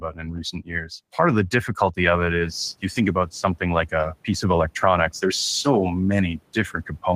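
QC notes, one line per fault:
0.00–1.19 s, speech cut by the noise suppressor: the suppressor misread parts of the opening speech as background and pulled them down by up to about 12 dB, roughly 0.7 s in all, so soft consonants and word endings sound swallowed and faint.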